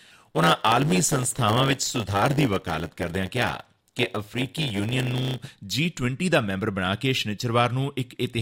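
A block size mismatch (padded) runs from 0.0 to 5.47 s in this speech clip: one processing stage delivers blocks shorter than the next stage expects, and each block is completed with zeros. That inserts a brief silent gap into every block, producing a buzz at 100 Hz, the block rate. Because the padding stretches time, the speech plays at about 0.92 times normal speed while keeping roughly its normal pitch.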